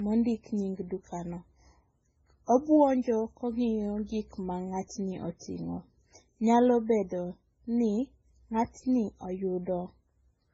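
The speech appears to have been transcoded between lossy codecs, likely a very low-bitrate MP3 re-encoded as AAC. Nothing sounds above about 7.7 kHz throughout, and the artefacts left by the first encode are overlaid with the second codec's own artefacts.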